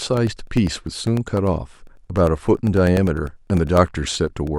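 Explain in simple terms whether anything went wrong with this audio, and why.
Periodic USB or driver dropouts: the audio path stalls every 0.1 s from 0.07 to 4.47 s, leaving millisecond silent gaps heard as steady ticks.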